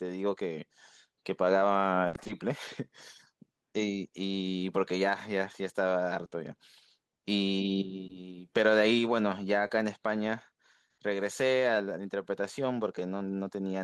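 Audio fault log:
2.07–2.31 s, repeated packet loss (robotic sound): five gaps within a quarter second, longest 60 ms, 140 ms patched from prior sound, so speech turns choppy and robotic.
6.25–6.33 s, 8.07–8.11 s, 9.67–9.71 s, short concealed packet loss: 20 ms missing each time, twice back-to-back at 6.25 s, filled by extending preceding sound, heard as brief smears or wobbles.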